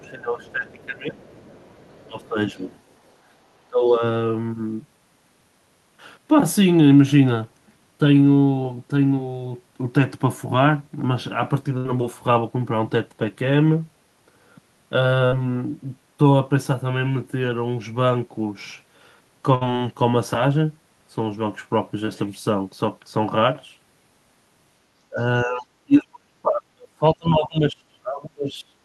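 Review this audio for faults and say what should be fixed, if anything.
The echo canceller most likely failed to separate the local talker from the loudspeaker echo during overlap, so speech suppressed in double talk occurs: the talker's level drops by about 20 dB at 0.00 to 1.21 s and 3.70 to 4.02 s, about 15 dB at 2.07 to 2.66 s, and about 35 dB at 25.09 to 28.77 s. The sound dips and breaks up in pieces. Tuning the canceller's double-talk detector to reduce suppression during overlap would prevent this.

The canceller also likely left residual loudspeaker echo in the microphone signal, so the other side's voice leaks through at 0.44 to 0.82 s, 1.19 to 2.28 s and 2.70 to 3.11 s. It sits faint, about 30 dB below the talker, and about 35 dB below in the last stretch. Better echo-path adaptation or a stronger residual-echo stage would remove it.

A burst of packet loss left the receiver extrapolating and fading the last sound at 11.77 to 11.86 s, 15.26 to 15.35 s and 19.55 to 19.63 s. 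The result is a held buzz or fading hiss. Afterward the audio resumes with about 80, 60 and 60 ms missing. A larger jitter buffer or forward error correction would cover these gaps.

Short concealed packet loss at 22.05 to 22.09 s means about 20 ms never reached the decoder in time. The receiver filled it from the preceding sound, leaving a brief smear before the audio blends back. Redundancy or a slightly deeper jitter buffer would prevent it.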